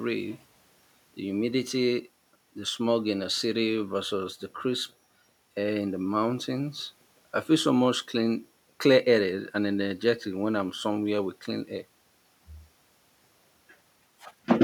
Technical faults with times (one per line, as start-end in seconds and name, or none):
none